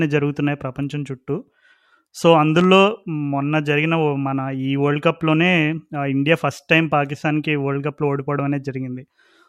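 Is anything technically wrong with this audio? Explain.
Yes. From 2.59 to 2.68 s there is a loud pop: two sharp thumps in quick succession, peaking well above the speech, which carries on underneath. The likely cause is a sudden voltage step from a plug, switch or static discharge, shaped by the following circuitry.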